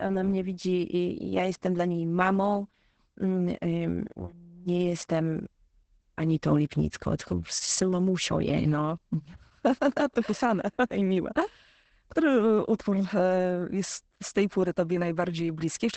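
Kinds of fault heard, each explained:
Opus voice compression: The speech has passed through a low-rate voice codec built on linear prediction. Nothing is left above 8.9 kHz, so the band stops at wideband. The damage is heavy for the whole clip. The speech sounds muffled and hoarse, with a slightly robotic edge, because the excitation is coded coarsely. The sound points to Opus in its SILK mode at around 10 kbps, working in 20 ms frames.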